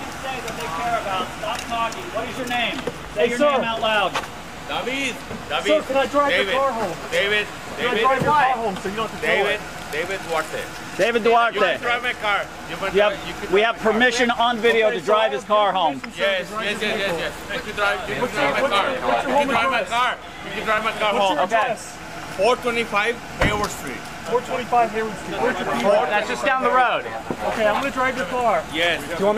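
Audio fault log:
7.83 s, 10.69 s, 20.78 s and 21.63 s: dropped buffer (overrun). The sound jumps forward with no gap, losing around 10 ms at each point and around 20 ms at 10.69 s. The likely cause is samples not collected before the hardware overwrote them, leaving the surrounding audio spliced directly together.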